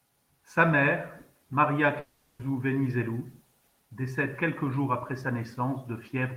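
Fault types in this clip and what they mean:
Long network dropout: a gap of about 0.4 s in the speech from 1.99 s to 2.41 s, likely from packets that never arrived. The receiver fills it with a fading buzz-like continuation of the last sound, and the speech then resumes with that section missing.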